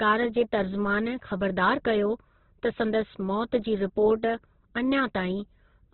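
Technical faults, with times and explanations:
Throughout, Opus compression: the speech is heavily damaged and confined to narrowband, with nothing above about 4.1 kHz, so it sounds boxed-in and muffled, and its tones come out grainy, rough and noisy. That points to a very low rate, likely Opus around 12 kbps in its CELT mode, which keeps every band's energy by filling gaps with folded or noise-like content. Unlike MP3 damage, there is less swirling from spectral holes, and unlike a simple low-pass, the remaining band is coarsened as well as cut.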